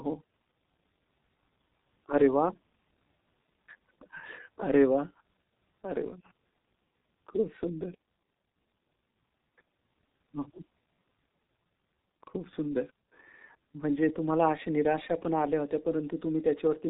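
From start to finish the speech carries heavy G.723.1 codec damage. It is a low-rate telephony coder that points to about 6 kbit/s and is updated in 30 ms frames. Nothing above 4 kHz survives, so the speech is muffled and hoarse, and consonants blur. The sluggish, grainy roughness sets it apart from plain band-limiting, which would sound dull but not hoarse.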